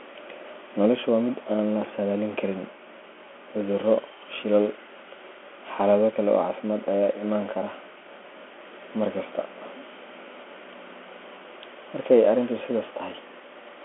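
From start to finish, the speech carries the sound of a Bluetooth CVSD headset codec. Nothing passes above 3.8 kHz, and the line sits roughly between 250 Hz and 3.4 kHz, so the voice is thin and boxy. CVSD sends one bit per sample, up or down, with an adapting step. The damage is plainly audible. Loud, bright sounds outrun the step and distort. S sounds turn scratchy, and a granular hiss sits beneath the voice. This fits a 64 kbps headset link.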